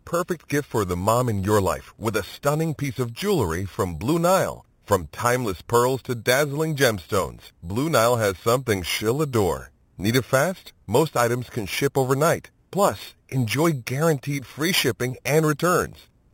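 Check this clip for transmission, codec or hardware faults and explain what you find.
One fault runs throughout: imaging from sample-and-hold upsampling. Speech held at 8 kHz was repeated to 48 kHz, mirroring the 0–4 kHz band into 4–8 kHz about 15 dB down as metallic fizz, seen as an inverted mirror image in spectrograms.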